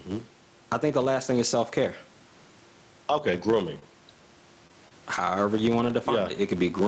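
Throughout the speech a steady 100 Hz buzz rises and falls with the level. This is a filter restarted on every block: it loses its state, so each block starts with a small transient.

Also throughout, the background swells in pauses and ducks by about 10 dB under loud syllables, squashing the dynamics. This gain pumping is likely a limiter clamping an overdriven microphone gain.

At 3.43–3.45 s, 5.17–5.19 s, 5.85–5.87 s, 5.89–5.91 s and 6.63–6.65 s, 20 ms stretches turn briefly rougher and noisier without any gap. Each is a lost packet rebuilt from error correction, decoded from a low-bitrate copy carried in the next packet.

At 3.79–3.84 s, 4.68–4.73 s and 4.88–4.93 s, brief smears or wobbles replace about 20 ms of audio, and the middle one stretches timing by roughly 10 ms. These are short concealed packet losses, filled by extending the preceding sound.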